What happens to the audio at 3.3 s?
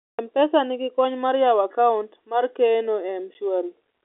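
At 3.34 s there's a brief dropout: packet loss filled with silence. About 10 ms of the speech, which fits a single lost packet, was replaced by dead air, so you hear a tiny gap with hard edges against the narrow telephone-band sound.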